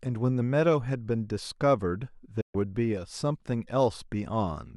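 At 2.41 s a digital broadcast dropout occurs: the receiver lost valid frames and muted, so the speech fades out within 8 ms and returns at 2.55 s.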